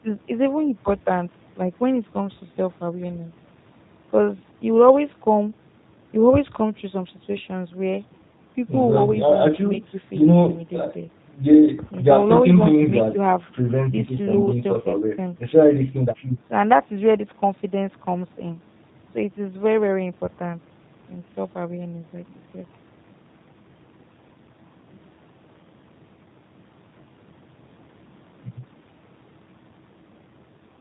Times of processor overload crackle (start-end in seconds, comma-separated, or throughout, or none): none